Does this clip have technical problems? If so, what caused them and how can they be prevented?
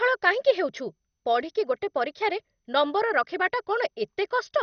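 Yes. Throughout the clip, likely MP2 compression at a low bitrate, consistent with about 48 kbps, left too few bits for the upper sub-bands, switching them off and coarsely quantising the rest. The speech is dull, with nothing above 6.4 kHz, and plainly audible gurgling, granular distortion. Encoding at a higher bitrate or with a more efficient codec would prevent this.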